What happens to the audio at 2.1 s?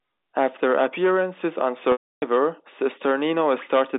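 At 2.1 s the audio is inside a packet loss with pitch repetition, running from 1.92 to 2.22 s, right after "appearances on". About 300 ms of audio never arrived. The receiver fills the gap by repeating the last pitch period, which is heard as a brief buzzy hold. That repeat fades out over about 50 ms. The rest of the gap is silent. The speech then returns through a short cross-fade, still in its narrow telephone band.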